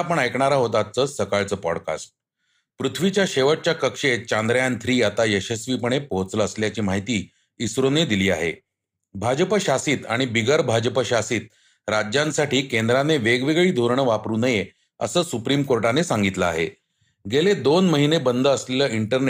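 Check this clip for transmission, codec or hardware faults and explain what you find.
Nothing faulty can be heard anywhere in this speech.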